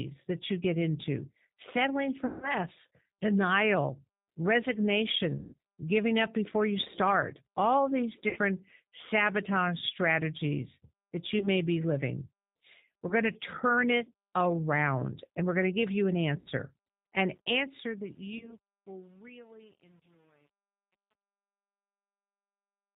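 Speech passed through a G.729 codec, the 8 kbit/s G.729A variant, and the damage is plainly audible. It rebuilds the voice from a filter, a pitch predictor and sparse pulses, so nothing above 4 kHz survives and the speech sounds rough and synthetic. VoIP packet loss, concealed by the speech codec, hits at 2.26 s just after "you get into settling" (160 ms lost), 5.39 s (140 ms), 8.29 s (60 ms), 11.39 s, 13.09 s just before "to turn it around", 16.40 s after "to give you an" (60 ms), and 18.38 s. The decoder stretches its last frame into a fading buzzy tone or coloured noise, and the voice stays weak for a moment afterwards.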